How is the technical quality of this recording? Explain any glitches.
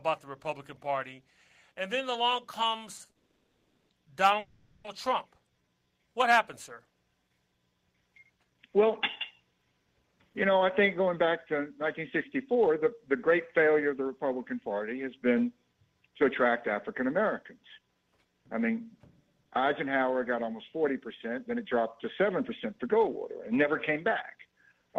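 The recording has a cluster of network-timing glitches early on, followed by several stretches where the playback runs slightly fast.

At 2.97 s and 3.05 s there are two short stalls from a late packet. Each time the buffer ran dry, so the receiver held the last sound for about 20 ms and then 40 ms, leaving a brief stretched, buzzy moment. Nothing gets lost.

Right after, from 3.11 to 3.91 s and again from 4.39 to 4.86 s, there are call audio freezes. The sound hangs as a fading buzz for roughly 0.78 s and then 0.45 s before resuming where it left off. The likely cause is packets held up in transit.

From 5.45 to 6.11 s there's a jitter buffer slow-down. The receiver repeated tiny pitch-period chunks to rebuild its reserve, adding about 118 ms, so that section plays at around 83% speed with the same pitch and drawn-out sounds.

Then come jitter buffer speed-ups at 8.36 to 14.70 s, 16.89 to 17.95 s, and 20.84 to 24.90 s. 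The buffer held too much, so the receiver trimmed short pitch periods to shrink the delay. That runs the audio at about 105 to 106% speed, cutting nearly half a second in the long first stretch and a fraction of a second in the others. It sounds a little hurried, but the pitch doesn't change.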